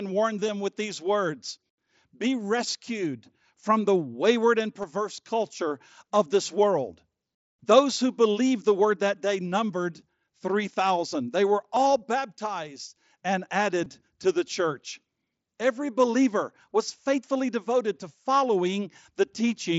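Concealed Bluetooth headset packet loss occurs at 0.47, 4.82, 11.76 and 13.84 s. Each gap lasts 15 ms or less. The receiver filled each gap by repeating the best-matching stretch of recent waveform. The single lost frame at 11.76 s is nearly hidden, while the two-frame runs at 0.47, 4.82 and 13.84 s give a brief buzzy tone with a small warble where real audio returns.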